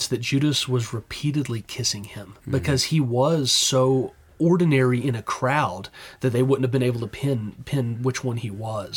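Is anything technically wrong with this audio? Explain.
No, the signal shows no technical faults anywhere in the recording.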